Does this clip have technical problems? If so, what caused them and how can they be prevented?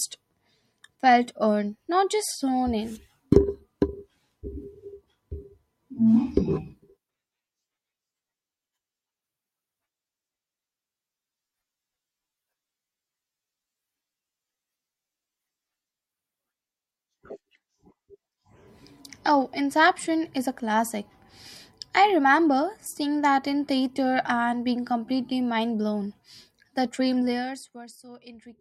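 Yes. Zipper noise runs from 27.21 to 27.92 s as the level drops about 20 dB in unsmoothed steps, roughly a hundred per second. This shows as a staircase waveform envelope and evenly spaced thin vertical spectrogram lines. Prevent it by ramping gain per sample instead of per buffer.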